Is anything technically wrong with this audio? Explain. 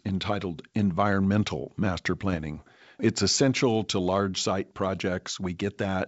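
Yes. From 2.26 to 2.65 s the speech suffers bit errors on an ADPCM link, at a rate of roughly a third of a percent, on what sounds like a G.722 wideband channel. Each flipped bit throws off the decoder's step size and prediction, so the error smears over several milliseconds and is heard as pops, rough crackly bursts and brief jumps in level.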